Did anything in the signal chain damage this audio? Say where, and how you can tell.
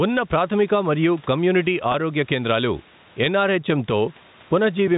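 Yes. Throughout the clip the level swings by about 15 dB, and loud and soft passages sit squashed together. This is gain pumping, likely from call-processing gain set far too hot, with a fast limiter clamping every peak.

From 1.92 to 1.94 s, just after "ప్రాథమిక మరియు కమ్యూనిటీ", the sound briefly holds on a slightly buzzy, sustained tone before continuing. That is packet loss with pitch repetition at the network stage: about 20 ms of audio went missing, and the receiver filled it by looping the last pitch period.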